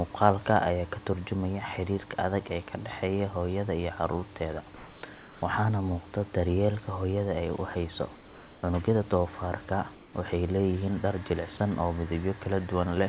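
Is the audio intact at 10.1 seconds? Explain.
No. From 9.95 to 10.13 s, a stretch of about 0.18 s, the room background in a pause between phrases is replaced by a smooth, even hiss with none of the real room's texture, about 2 dB quieter than the surrounding noise floor, which sits roughly 25 dB below the loud parts. This is comfort noise in place of the background, likely from the sending side halting transmission during silence while the receiver substituted synthetic noise roughly matched to the room's spectrum.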